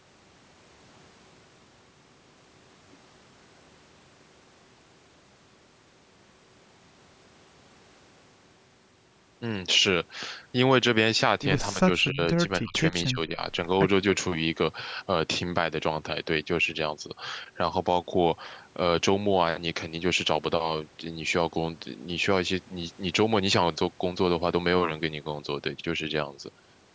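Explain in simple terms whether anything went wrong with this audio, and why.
The speech dips sharply or cuts out in pieces at 11.74 to 12.2 s, 12.61 to 12.75 s and 13.11 to 13.41 s. This is likely speech suppressed in double talk: with both sides speaking, the call's echo canceller mistook the talker for echo and turned it down.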